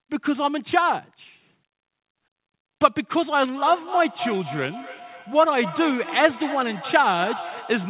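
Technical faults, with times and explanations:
3.57–7.89 s: feedback echo between two devices. The speech returns at a regular interval of roughly 300 ms, peaking about 12 dB below the direct speech, through a narrowband path with nothing above 4 kHz. A second device in the room is replaying the call into the first microphone, whose echo canceller only removes its own playback.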